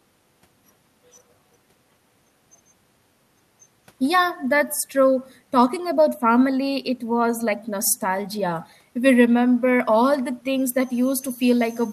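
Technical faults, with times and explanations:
No technical faults detected in the speech recording.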